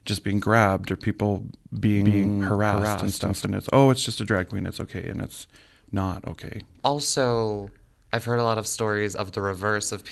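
A doubled audio track runs from 1.76 to 3.46 s in this speech clip. A second full-band copy trails the original by roughly a fifth of a second at about the same loudness, so every syllable is echoed with a flat, dry repeat that carries no decay or room colour. The copy appears and vanishes abruptly at those edges. That points to the same signal likely being captured a second time through a slower path, or to an edit holding two out-of-step copies. The audio also passes through a call codec, with its coding noise and a high-frequency ceiling near 12 kHz, consistent with Opus at around 32 kbps.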